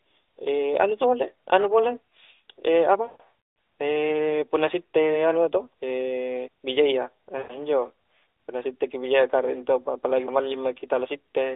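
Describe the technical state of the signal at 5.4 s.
At 5.4 s the speech is intact, with no fault present; it comes through the AMR narrowband mobile codec path, band-limited as a phone line normally is.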